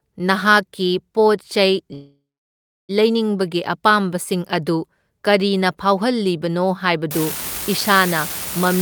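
From 1.93 to 2.91 s there is a call audio freeze: packets were likely held up in transit and the jitter buffer ran dry. The last sound is stretched into a fading buzz that drops to silence for about 680 ms, then the speech resumes where it stopped. Nothing is lost, but everything after arrives roughly 0.95 s later.

From 7.11 s to the end of the clip, an unreliable data bit on one marginal line flips in a random share of samples. Each error adds an identical spike, heard as a constant crackling fizz that continues through the pauses.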